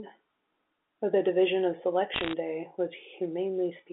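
Between 2.14 and 2.33 s, a burst of sharp ticks and gritty crackle cuts across the speech, while the speech underneath stays intact. These are bit errors on a digital phone line. Roughly one bit in every 150 was flipped, and each flip corrupts a single logarithmically coded sample. A flip landing on a high-order bit, or on the sign of a loud sample, throws that sample far off, and you hear it as a click. The narrow telephone band around it points to a standard G.711 line.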